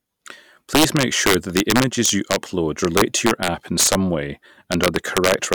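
Integer overflow runs throughout this speech. Loud peaks, driven about 4 dB past the limit, wrap to the opposite sign instead of clipping. A small fraction of samples produce violent cracks.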